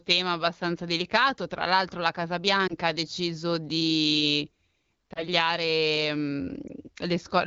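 Speech carried over AMR wideband at 12.65 kbit/s, where single speech frames failed their radio checksum and the decoder patched each gap from the last good pitch and vocal tract settings at lowered gain. These lost AMR speech frames are heard as brief dips or warbles at 2.67 to 2.74 s, 5.13 to 5.28 s and 6.68 to 6.72 s, each consistent with one missing 20 ms frame.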